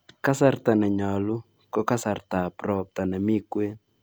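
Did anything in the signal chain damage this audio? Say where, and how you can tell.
No, nothing in the signal chain has left a mark on this speech that I can hear, so there's no damaged stage to point to.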